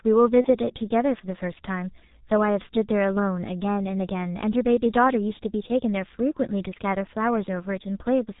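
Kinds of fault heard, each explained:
G.723.1 codec: The whole clip carries the sound of this early internet-telephony speech codec, with heavy damage that fits a rate near 6.3 kbit/s. Nothing comes through above 4 kHz, so the speech is muffled. Its slowly updated voice model leaves a hoarse, rough texture and smeared consonants. Unlike simple low-pass filtering, which only dulls the top end, this coding also roughens and blurs the voice itself.
VoIP packet loss concealed by the speech codec: From about 0.41 to 0.49 s the speech briefly turns into a stretched, buzzy or coloured sound that fades, which fits one lost 30 ms frame. The decoder filled the gap by extending its last pitch and filter with falling gain. The voice then stays weak for a moment after the loss. A plain dropout would leave silence or a click instead of this synthetic, fading continuation.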